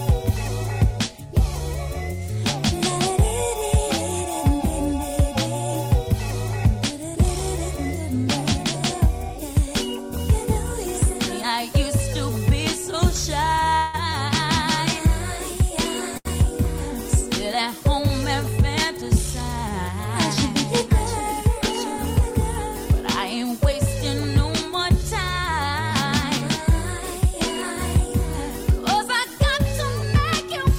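At 13.69 to 13.74 s a packet arrived late and the jitter buffer ran dry for a moment, producing a short stall from a late packet. The receiver held the last sound for 25 ms until the data came in, then resumed from the same point. Nothing is lost, but that instant is drawn out, with a faint buzz or slight dip before the audio moves on. The same thing happens again at 16.18 to 16.27 s, this time filling 75 ms, so the held sound is longer.

Right after the first stall, from 13.76 to 13.96 s, the audio freezes for 176 ms. This call audio freeze likely comes from packets held up in transit, which left the receiver with nothing to play. It extended the last sound into a buzzy tail that fades but does not reach silence. When playback picks up again it continues from where it stopped. A gap has been inserted and no audio is missing, and the whole stream now runs about 0.2 s later than before.

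From 25.03 to 25.71 s the jitter buffer speed-up is at work. The buffer was holding more audio than its target, so the receiver trimmed it back by cutting out many tiny pitch-period-sized slices in quick succession, roughly 50 ms in all. Playback runs at 106 % speed with the pitch unchanged, so this stretch sounds slightly rushed.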